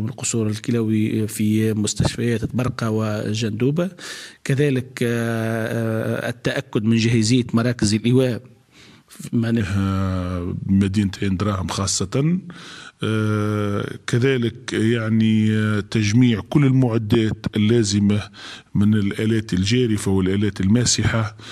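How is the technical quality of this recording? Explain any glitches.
One fault: the second half plays at the wrong speed. Section at the wrong speed, 9.6 s to the end: the audio runs at 0.876x, likely clocked wrongly on playback or editing, so it drags and drops about two semitones.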